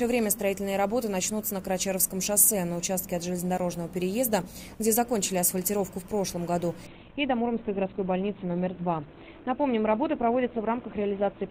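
At 6.87 s the audio switches abruptly to an adaptive stream at a lower bitrate, lasting to the end. There is no gap. Everything above 4.2 kHz vanishes and codec artefacts thicken. The connection slowed, and the dull, smeared sound fits a drop from roughly 64 to 12 kbit/s.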